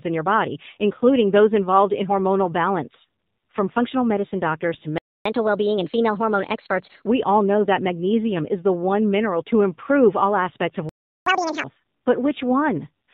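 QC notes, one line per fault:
Throughout: AMR narrowband mobile codec. The speech is band-limited at 4 kHz, so sibilants and airiness are gone, and at what sounds like a low bitrate near 7.4 kb/s the voice turns buzzy and synthetic. That vocal-tract modelling colour separates it from a plain low-pass filter.
4.98 to 5.25 s: playback stall. Just after "functional medicine doctors to" the sound drops to silence for about 0.27 s and then resumes exactly where it stopped, with nothing skipped. That points to the player likely being starved of data, not to a cut in the recording.
5.25 to 7.07 s: catch-up at higher speed. For about 1.8 s after that gap the speech runs 1.15 times fast and sits roughly two semitones high as the backlog is resampled, then settles back. The combined rise in pitch and tempo rules out a natural change in speaking rate.
10.89 to 11.26 s: playback stall. After "improve all aspects of" the audio goes silent for about 0.37 s and picks up at the same point, which fits the player likely running dry again. 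Because the continuity is intact it is not a dropout or an edit.
11.26 to 11.64 s: catch-up at higher speed. For roughly 0.37 s the sound plays at double speed, around ten semitones up, chipmunk-like, then snaps back to normal. This burst is far shorter and steeper than the first catch-up.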